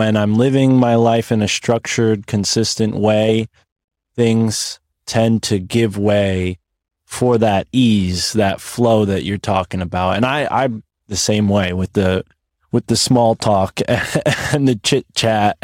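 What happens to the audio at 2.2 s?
At 2.2 s the audio plays through intact, with no dropout, click, distortion or other disturbance at that point.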